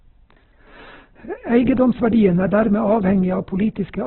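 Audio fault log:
throughout: Opus compression, likely at a rate near 8 kbps in its CELT mode. The speech is narrowband, rough and grainy, with nothing above 4.1 kHz, where a spectrogram shows a flat ceiling and noisy, smeared bands in place of clean harmonics.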